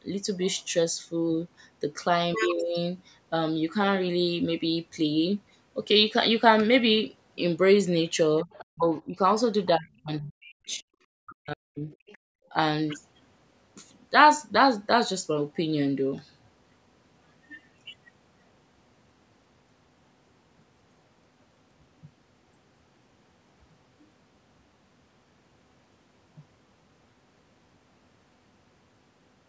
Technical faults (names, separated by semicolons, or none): speech suppressed in double talk; other side's voice leaking through